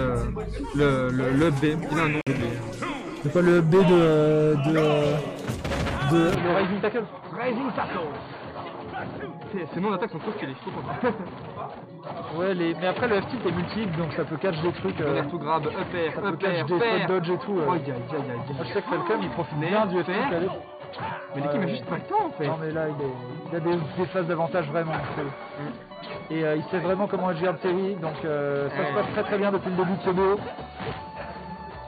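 A Bluetooth stall at 2.21 to 2.27 s cuts the sound to about 54 ms of silence before it resumes. This is likely wireless interference delaying packets until the receiver's buffer emptied, so playback paused while the missing data was resent.

An input switched to a poorer device at 6.35 s and stays in effect to the end. There is no gap at the change. The sound turns dull, with nothing above 4.6 kHz, drops by roughly 5 dB and gains a faint new background noise, likely from a narrower-band microphone or headset call profile.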